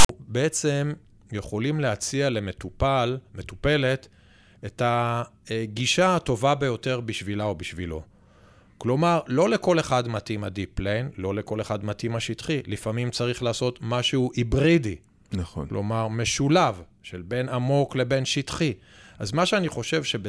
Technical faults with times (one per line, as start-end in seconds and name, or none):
0.00-0.09 file tags played as audio